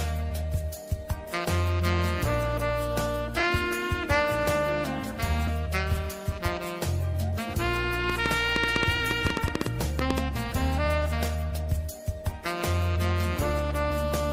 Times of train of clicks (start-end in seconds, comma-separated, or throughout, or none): 8.10-10.19